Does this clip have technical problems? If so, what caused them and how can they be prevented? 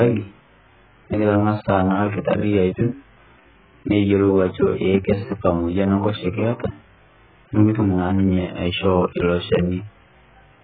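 Yes. The speech was likely passed through heavy AAC compression at a starved bitrate. Throughout, nothing remains above 4.5 kHz, and the sound is dull, smeared and fizzy, which fits roughly 8 kbps. Encoding at a much higher bitrate would prevent this.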